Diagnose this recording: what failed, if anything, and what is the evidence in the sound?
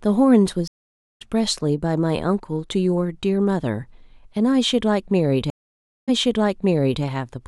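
The failure is at the network stage, a stream reconnect, twice in this speech. At 0.68 s the audio drops to silence for about 0.53 s and returns around half a second further on, so some speech is skipped. At 5.50 s a 0.58 s silence ends with the audio resuming about 0.95 s earlier, repeating material already heard, until 7.03 s. Each resumption starts a fresh decoder, entering softly. A plain packet-loss dropout would resume at the same point.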